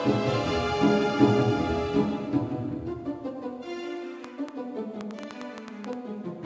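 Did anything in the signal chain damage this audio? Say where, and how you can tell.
Yes: a train of clicks from 4.24 to 5.94 s, around ten same-shaped pops at an uneven 6.5 per second, about 10 dB over the music, likely analogue-wiring interference.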